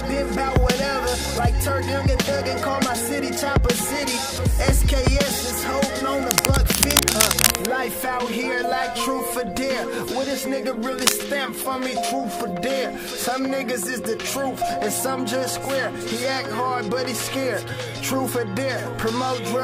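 From 6.23 to 7.74 s and again at 10.99 to 11.14 s, cable scratch noise adds dense, uneven crackle, first at about the signal's level, then louder, likely from a worn connector being moved.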